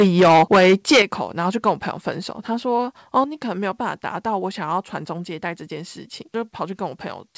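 From the start to 1.02 s the loudest syllables crackle harshly, with about a fifth of the samples clipped. This is likely microphone overload, driving the converter about 13 dB past its limit. At 1.02 s the level drops abruptly by about 9 dB, likely the microphone volume stepped down by the call software. A brief crackle returns from 3.17 to 3.19 s, about 1 dB over, and at 3.24 s the level falls again by about 5 dB. Through the G.722 call path nothing is heard above 8 kHz.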